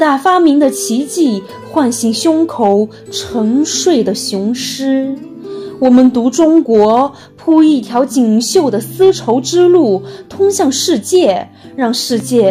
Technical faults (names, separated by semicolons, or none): audio missing between chunks